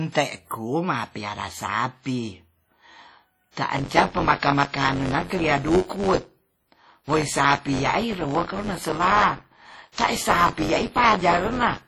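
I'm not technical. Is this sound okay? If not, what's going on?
No. WMA compression runs through the whole speech clip, and the damage is heavy. The sound rings and washes, with hiss that swells and fades with the speech and nothing above about 17 kHz. That is likely from squeezing the file hard to make it small.

Pre-echo appears at 3.52 to 3.57 s and again at 9.92 to 9.98 s. The compression spreads its noise over chunks of time, so a short hiss, about 54 and 59 ms long, arrives just before a sharp sound, softening its start.

Buffer tearing begins at 3.72 s and lasts to the end. The playback software and the sound hardware fell out of step. In every small chunk, roughly a sixth of the audio is leftover from about 20 ms earlier, causing a robotic buzz near 94 Hz, which fits a 512-sample buffer.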